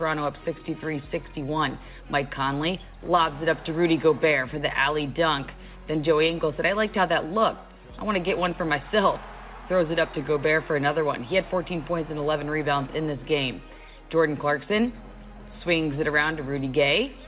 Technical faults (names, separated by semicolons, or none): none